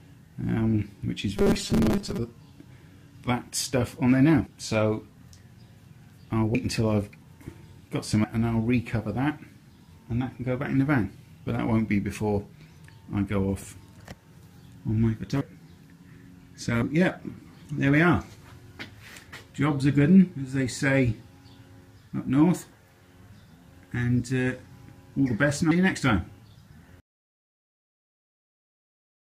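From 1.37 to 2.18 s the sound takes on a rigid metallic buzz, the robotic sound from repeated short buffers. The buzz sits at 200 Hz, which fits a buffer of about 5 ms being replayed whenever fresh audio arrived late, likely replacing roughly half the material. On a spectrogram this stretch shows evenly spaced horizontal harmonic lines at multiples of 200 Hz. The waveform shows a short block repeating identically.

Compressed frames are skipped at 4.46, 6.54, 8.24, 15.41, 16.82 and 25.71 s. At each point whole decoded frames never play, so the audio jumps forward by around 100 ms at 4.46, 6.54 and 16.82 s, around 150 ms at 25.71 s, around 200 ms at 8.24 s, and around 400 ms at 15.41 s. Those gaps fit whole multiples of a 32 ms frame.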